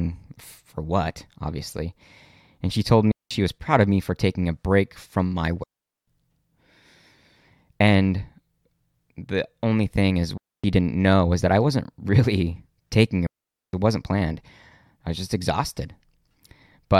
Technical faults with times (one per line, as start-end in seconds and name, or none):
3.12-3.31 digital wireless dropout
5.64-6.07 digital wireless dropout
10.38-10.64 digital wireless dropout
13.27-13.73 digital wireless dropout